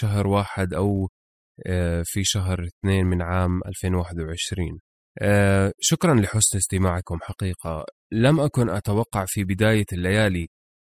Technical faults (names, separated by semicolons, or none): none